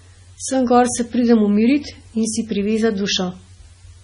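Speech throughout shows heavy damage of the kind MP3 compression leaves, likely from a low bitrate encode, and the sound fits something near 24 kbps. Nothing is present above 10.6 kHz, and weak spectral detail flickers in and out from frame to frame, giving a watery, swirling texture with chirpy sibilants and smeared consonant onsets. That flicker separates it from a simple low-pass filter, which would dull the top end but leave the remaining sound steady.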